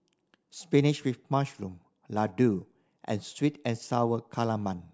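No technical faults can be heard anywhere in the recording. The speech holds steady from its first moment to its last.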